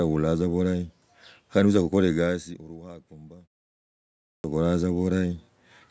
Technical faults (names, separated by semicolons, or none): clipped start after a pause